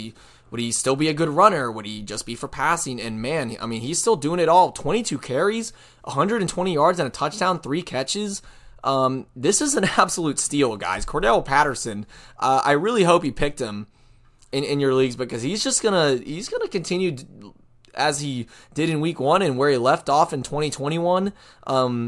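Listening closely to this recording of speech, nothing stood out as a technical problem at any point.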